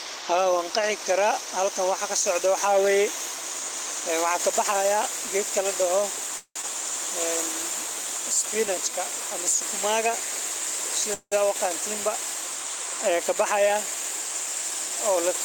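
Long network dropout at 6.37 to 6.66 s, just after "geedka ladoho". The speech stops arriving and the receiver stretches the last sound into a fading buzz lasting about 256 ms. That ends in roughly 70 ms of silence before the audio resumes. About 120 ms of speech never returns, so the talker seems to jump ahead. The likely cause is a stall in the network path, after which playback settles around 70 ms later than before.

Jitter buffer slow-down from 7.81 to 9.77 s. Running short on reserve, the receiver repeats single pitch periods and slivers of pause to pad the stream. This adds 61 ms across those two seconds, so the speech plays at 97% speed while keeping its pitch. The sounds come out slightly drawn out.

Call audio freeze at 11.14 to 11.35 s. Playback halts and the last sound is held as a fading buzz for about 179 ms, with around 50 ms of silence at the end. When the audio returns it continues exactly where it stopped, with nothing lost, so the result is an inserted pause that leaves everything after it 179 ms later. 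This likely comes from delayed packets draining the jitter buffer.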